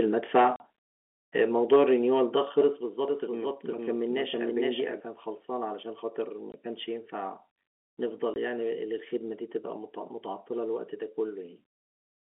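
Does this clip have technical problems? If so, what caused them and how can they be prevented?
Yes. Microphone overload shows at 0.35–0.41, 1.72–1.83 and 2.58–2.61 s: peak tops are flattened, up to about 4 dB over the limit, giving a crackling harshness. It is likely caused by input gain set too high. Unlike a packet gap, nothing is missing; the loud sound is distorted. Lowering input gain until peaks stay below full scale prevents it.

Packet loss filled with silence cuts holes at 0.56–0.60 s (40 ms, consistent with two 20 ms packets), 6.52–6.54 s and 8.34–8.36 s. These are abrupt dead gaps with hard edges rather than distortion. A stable connection and packet loss concealment on the receiver prevent it.

Microphone volume stepped down appears at 1.76, 2.76 and 4.8 s as sudden level drops of about 2, 4 and 2 dB, with voice and background falling together. The likely cause is the call software reacting to the overloads. 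Unlike a dropout, the sound continues, only quieter. Setting the gain correctly beforehand prevents it. The telephone band of roughly 250 Hz to 3.5 kHz can also be heard throughout.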